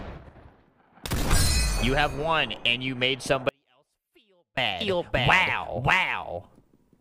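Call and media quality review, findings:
Audio dropout to a faint residue, 3.49 to 4.57 s: signal cuts abruptly for about 1.08 s, leaving only faint sound roughly 40 dB down, then snaps back. Likely a capture or transport stall upstream while the downstream path stayed live.

Doubled audio track, 4.81 s to end: a full-band second copy at about equal level trails by roughly half a second, dry and abruptly onset. Likely a duplicate capture path or mixer feed summed out of step.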